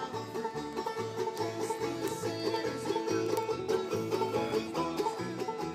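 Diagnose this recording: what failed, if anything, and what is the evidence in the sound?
The digital link failed: the receiving device was running on its own word clock rather than locking to the sender's, and the two clocks drifted apart by something on the order of 400 ppm. This produced word clock ticks from 0.13 s to 5.75 s, about a hundred sharp ticks of uneven strength at a steady rate near twenty per second. Each tick marks the clocks slipping past each other, where a single sample is dropped or repeated and the samples next to it are misread.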